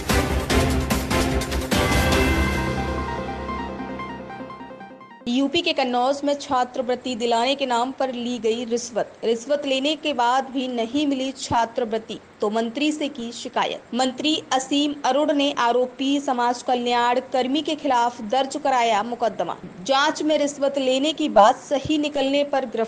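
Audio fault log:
No fault is heard anywhere in this audio. Nothing in the recording calls for an entry in this log.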